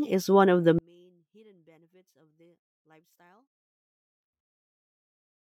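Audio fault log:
0.79–5.51 s, one channel inverted: likely a polarity flip on one stereo channel, cancelling the mono sum; after "is one of the", the speech drops about 37 dB.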